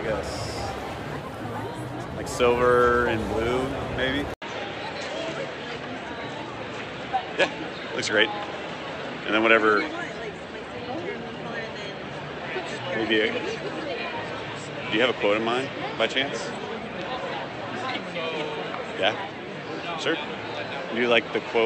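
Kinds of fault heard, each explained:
Input switched to a poorer device, from 4.34 s: after a brief 80 ms silence, the sound turns duller and stays that way to the end, with nothing above 8.2 kHz, while the loudness stays about the same. The likely cause is the recording input changing mid-take to a narrower-band microphone or a headset's call profile, whose limited bandwidth trims the top end. A new, faint background noise appears, sitting far beneath the signal.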